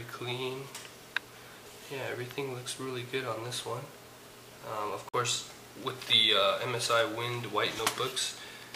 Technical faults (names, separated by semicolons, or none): Bluetooth stall; loud pop